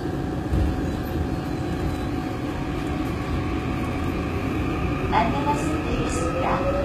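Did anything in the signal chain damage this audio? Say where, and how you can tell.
Yes. The damage sits at the codec stage and runs through the whole clip: the audio was likely encoded with HE-AAC at a very low rate, and the coding fits something near 20 kbps. Only the lower spectrum carries real detail. The treble is rebuilt by copying lower bands upward, so the top sounds gritty and metallic, with harmonics that don't line up across the crossover, and nothing at all above 14.9 kHz.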